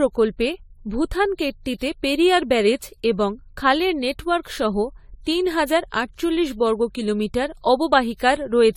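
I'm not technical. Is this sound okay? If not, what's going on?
No. Generation loss runs through the whole recording, from the first second to the last. The speech sounds swirly and hollow, and the starts of sounds are blurred rather than crisp. The likely cause is that the file was compressed, opened and compressed again roughly seven times. Each round throws away slightly different detail, so the damage piles up instead of staying small.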